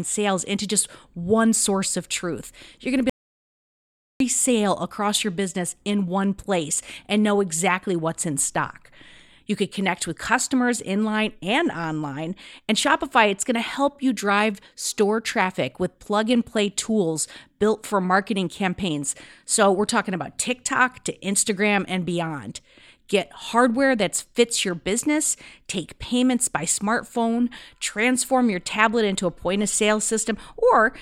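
At 3.10 s, right after "going to be", the speech cuts off mid-flow and the clip falls into dead silence with no room tone beneath it, until sound returns abruptly at 4.20 s on "sale across your business". This is an audio dropout to silence: about 1.1 s of input never reached the recording, and the encoder kept writing silence, most likely because the input device or link briefly disconnected or was muted.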